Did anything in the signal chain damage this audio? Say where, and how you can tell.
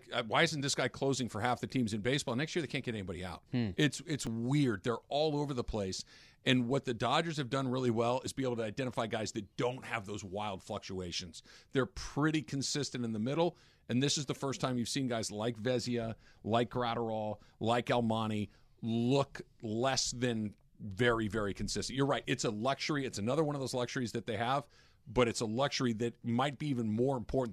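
Yes, there's overlap between stream segments, from the streaming/network stage: tiny clicks or skips in the speech at 2.28, 4.27, 8.27, 14.24, 22.24 and 26.22 s, all near 2-second segment boundaries. Overlapping timestamps made the player trim several milliseconds of real audio, so the waveform jumps.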